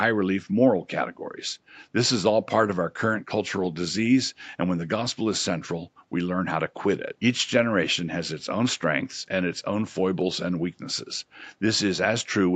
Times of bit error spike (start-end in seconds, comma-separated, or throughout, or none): none